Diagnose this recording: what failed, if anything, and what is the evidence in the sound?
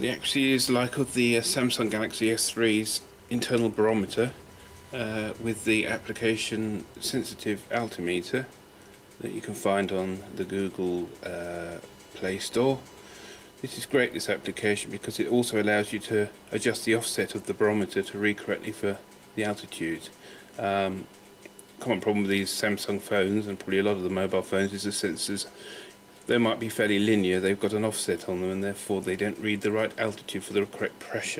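Nothing in the audio points to a failure at any stage of the chain, from capture and conversion through processing, transmission, storage and playback.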